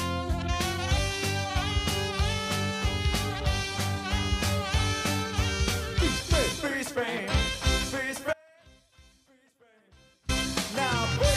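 At 8.33 s the sound drops out abruptly and stays down until 10.29 s, nearly two seconds. This is an audio dropout to a faint residue. The gap is not silent. A faint trace of the sound remains, roughly 30 dB below its normal level. The likely cause is a brief loss of the wanted signal while the path after the break stayed live. The cut and the return are both sudden, with no fade.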